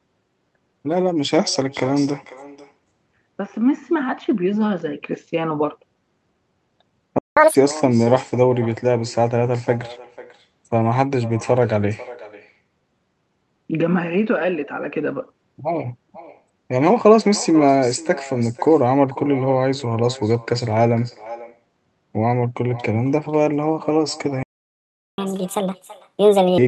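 Right from the start there's an echo with no canceller: every phrase comes back about half a second later as a thinner copy, about 18 dB down. Someone's loudspeaker is feeding the call back into their mic, and nothing is removing it.

At 7.18 s the sound cuts out for 180 ms, a playback stall that likely comes from the player running dry. At 7.37 s it catches up at higher speed, playing at double speed and roughly ten semitones high until 7.55 s.

It happens again, worse. The playback stall runs from 24.43 to 25.18 s, a full 750 ms of silence. Then there's a catch-up at 1.5× speed, around seven semitones sharp, that chipmunks along until 26.58 s.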